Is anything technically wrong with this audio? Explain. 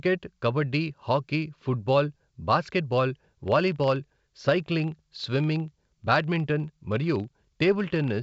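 Yes. From 3.36 s to the end of the speech clip, the filter is restarted on every block. Its memory is cleared at each block boundary, so each block starts from silence and begins with a small transient. The result is a regular ticking buzz at about 25 Hz, which fits blocks of roughly 40 ms, and it grows louder and softer with the speech level. A spectrogram shows evenly spaced thin vertical lines, and the waveform shows small periodic glitches. The G.722 wideband coding at 64 kbit/s stays clear up to about 7 kHz, with at most a faint hiss.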